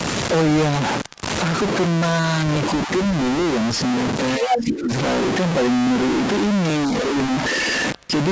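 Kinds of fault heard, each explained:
Stuck bit: a distortion runs through the whole speech clip, and the pauses fill with noise instead of going quiet. That likely comes from one data bit held fixed, which throws about half the sample values off by that bit's weight.
Clock drift buffer slips: from 0.91 to 7.53 s a click recurs every 0.83 s, about ten in all. Likely two devices running on separate clocks roughly a thousandth apart, so the buffer between them drops or repeats a block of around thirty samples each time.
Speech suppressed in double talk: at 2.86 s the talker dips by about 10 dB for a moment, and from 4.38 to 4.91 s by about 15 dB, because the echo canceller likely couldn't tell the talker from the loudspeaker echo and turned both down.
Other side's voice leaking through: from 4.44 to 4.66 s a second voice comes through at about the talker's own level, and from 7.98 to 8.07 s a faint scrap at about 35 dB down, likely loudspeaker sound the echo canceller failed to remove from the microphone.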